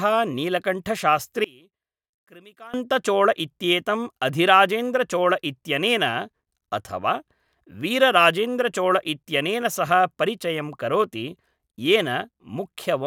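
From 1.44 to 2.74 s the speech drops by about 26 dB to a faint copy. This is likely one channel inverted, cancelling centred sound in a mono sum.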